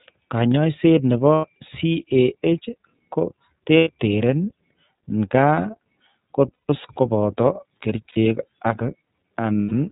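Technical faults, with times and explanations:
Throughout, iLBC codec: the speech passes through a narrowband VoIP coder running at 13.33 kbps, which fits 30 ms frames. Nothing above 4 kHz survives, so the voice sounds boxed-in, with a plainly audible rough, synthetic edge where each frame's excitation is rebuilt from a compact model. On a spectrogram the energy stops at a hard ceiling near 4 kHz across the whole clip, and the harmonics look slightly smeared and grainy rather than cleanly striated.
1.35–1.44 s, 3.78–3.90 s, 6.53–6.70 s, 8.09–8.17 s, 9.60–9.73 s, lost iLBC frames: five dropouts lasting 60 to 150 ms, the longest at 6.53 s. Where packets went missing, the decoder filled the hole by repeating the last pitch cycle mixed with noise, so each gap sounds like a held, slightly buzzy or breathy vowel that fades over the longer losses. Because every frame decodes on its own, clarity returns right after each gap. 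A spectrogram shows flat, unchanging harmonic bands through each gap, and the waveform shows a repeating, decaying cycle.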